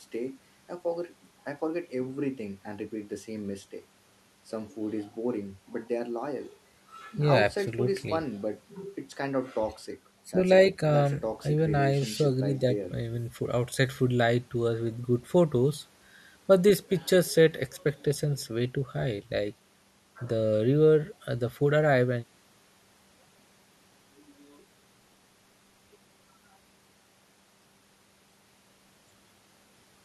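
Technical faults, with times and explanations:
No technical faults audible anywhere in the speech recording.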